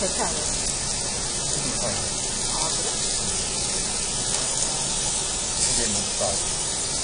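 A recording of sounds carries AAC compression artefacts throughout: a dull, smeared top end with nothing above 9.8 kHz, and plainly audible codec damage. On a spectrogram, energy stops at a flat ceiling there. The likely cause is AAC-LC coding at a low bitrate, about 32 kbps.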